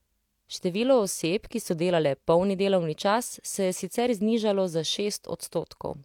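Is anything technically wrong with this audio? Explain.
No, nothing in this speech recording points to a technical fault.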